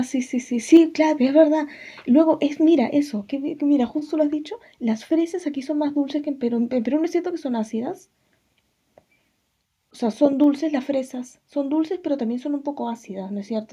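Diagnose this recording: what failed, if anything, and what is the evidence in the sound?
At the converter stage, the microphone's input gain was likely set too high, a case of microphone overload. The loudest peak of the speech, from 0.75 to 0.77 s, drives the converter past full scale by about 1 dB, and roughly a tenth of the samples in that stretch are flattened at the ceiling. Squaring off the waveform tops adds a brief, harsh crackle to that syllable.

In the call processing, the software likely reacted to that distorted peak by pulling the device's input volume down in a single step, the microphone volume stepped down fault. At 0.77 s, immediately after the clipped peak, the voice and the background noise both fall by about 2 dB at once. The change is a sudden step with no gradual fade, which is typical of an automatic gain control cutting the input level once.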